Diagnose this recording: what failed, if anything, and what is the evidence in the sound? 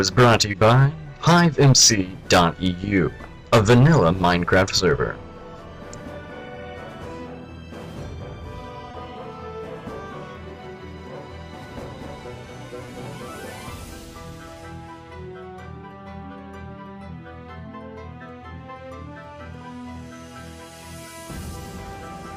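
Short concealed packet loss on the network path at 0.51, 8.91 and 12.85 s: the receiver patched each 20 ms gap by extending the preceding sound, leaving brief smears.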